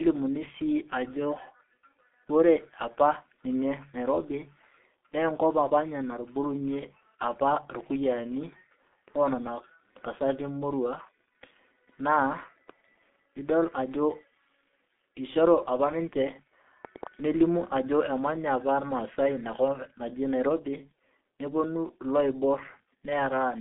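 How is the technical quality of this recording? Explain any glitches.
The quality is poor: the whole speech clip has been through heavy low-bitrate telephone coding. G.723.1 codec, throughout: the sound points to this early internet-telephony codec at a rate that fits about 6.3 kbit/s. It works in 30 ms frames and rebuilds the voice from a model that adapts slowly, so consonants smear together and the tone turns hoarse. The band is confined to roughly 200 Hz to 3.6 kHz, with nothing above 3.8 kHz, leaving the speech muffled and thin.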